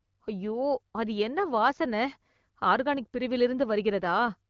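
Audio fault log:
The speech carries the band-limited, lightly coded character of an AMR wideband (HD Voice) link, which fits a rate of around 12.65 kbit/s, with no technical fault present.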